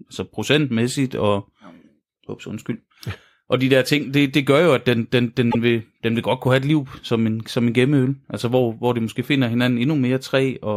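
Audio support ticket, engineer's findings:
Repeated frames, 5.50 to 5.58 s: short stutter in the speech, where a 78.4 ms chunk plays twice back to back. Probable component is the encoder output or the transport layer, where a run of compressed frames got written or sent twice. The block length fits about three codec frames. The decoder just replays them, so the clip runs 78.4 ms longer than it should.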